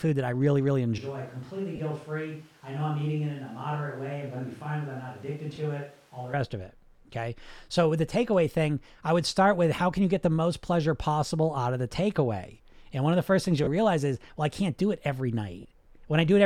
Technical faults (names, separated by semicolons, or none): switch to a distant microphone; lost LE Audio frames